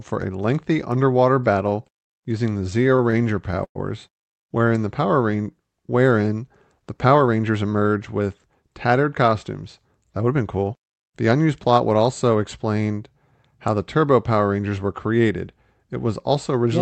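Repeated stalls (stutter) run from 1.69 to 3.78 s. Packets arrived late and the jitter buffer kept running dry, so twelve times the receiver stretched the last sound to bridge the wait, about 0.32 s in all, the longest 110 ms. Nothing drops out, but the audio drags and stutters.

Jitter buffer speed-up follows from 6.83 to 8.21 s. With more audio queued than needed, the receiver repeatedly trimmed pitch-period-sized pieces, roughly 150 ms in total, so this stretch plays about 9% fast at unchanged pitch and sounds hurried, heard through the Opus call path's 8 kHz bandwidth.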